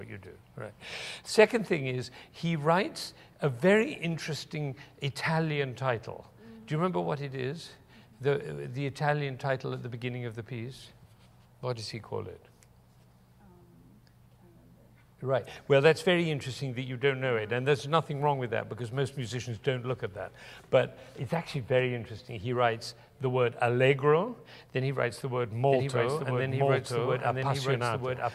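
From 25.70 s to the end, every sound repeats about a second later at roughly equal loudness, a clean full-band echo with no decay that starts abruptly. This doubled audio track is likely from a second, slower capture path mixed in.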